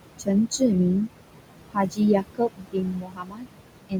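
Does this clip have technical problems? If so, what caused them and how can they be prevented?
Yes. The background pumps down between phrases: noise suppressor artifacts from a suppressor pulling its estimated steady noise down by about 22 dB. Limiting suppression depth or lowering the room noise, now about 10 dB under the speech, would prevent this.

Speech also sounds swallowed at 1.74–2.01 s, 2.2–3.49 s and from 3.89 s to the end. This is speech cut by the noise suppressor, which mistook quiet speech for noise and dropped it by up to about 22 dB. A gentler suppressor setting with better speech detection would prevent it.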